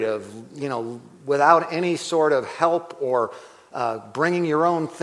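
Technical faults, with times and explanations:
2.4 to 3.9 s, resampler restarted on every block: regular ticks at 10 per second, one at each 100 ms block edge, heard only while sound is present. Each block went through the sample-rate converter in isolation, so at its edges the filter had silence or the block's far end where the neighbouring samples should have been. That leaves a small error at every seam. The pattern fits a downsampling step, such as 48 kHz to 24 kHz, restarting its state each block.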